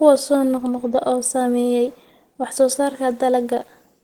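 From start to finish there's plainly audible Opus compression. The speech sounds muffled and hoarse, which fits the likely cause: the encoder in its hybrid speech mode at around 16 kbps, though content still reaches 20.1 kHz.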